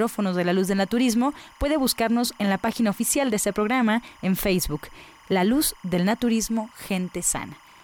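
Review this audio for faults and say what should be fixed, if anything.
Timecode bleed runs through the whole clip, from start to finish. A steady chirping warble sits behind the speech, about 30 dB below it. Linear timecode from a nearby track or cable is leaking into the audio path. The code is a square wave that flips between pitches near 1 kHz and 2 kHz. Its rhythm repeats 25 times per second, matching 25-frame timecode. Fix it by routing timecode away from audio lines and using balanced, shielded cabling.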